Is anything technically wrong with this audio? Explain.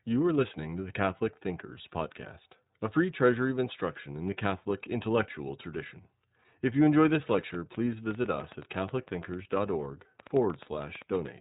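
Yes, there are two faults.

Throughout, the speech sounds slightly rough and synthetic, with nothing above 3.8 kHz. This is iLBC codec damage. Each 30 ms frame is coded independently at a low bitrate, which fits the 13.33 kbps mode.

From 7.17 s to 11.27 s, just after "you enjoy", a train of clicks ticks over the sound. There are about seven uneven pops per second, around 30 in all, peaking roughly 5 dB above the speech. The likely cause is interference or a faulty connection.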